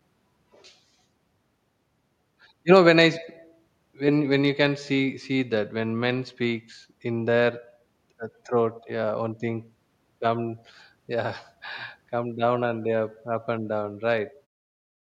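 No technical faults are audible.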